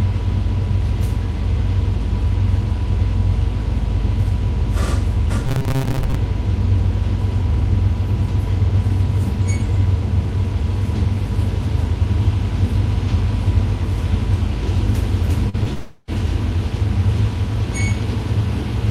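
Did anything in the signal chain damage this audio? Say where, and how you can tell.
Yes, three separate problems, all in the delivery path rather than the source.

Between 5.47 and 6.15 s there's robotic sound from repeated short buffers, which points to the driver or buffer stage. The audio takes on a rigid, metallic buzz at 134 Hz, which fits a repeated chunk of about 7.5 ms. Roughly half of that stretch is the same sliver looping while the real material gets skipped. The likely cause is the playback buffer running dry and being refilled with its own last few milliseconds.

Around 15.5 s there are two bits of short concealed packet loss, a network-stage fault. The first runs from 15.49 to 15.56 s, with about 40 ms missing. The second runs from 15.64 to 15.67 s, with about 20 ms gone. Each sounds like a quick smear or wobble where the decoder extrapolated from what came just before and then blended back into the real audio.

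Right after that, from 15.73 to 16.10 s, comes a long network dropout, with about 340 ms never arriving. The receiver covered the whole gap by stretching the last sound into a fading buzz or hiss, so there's no dead silence, just that decaying fill. The audio then picks up past the lost part. The likely cause is a burst of consecutive lost packets rather than anything local.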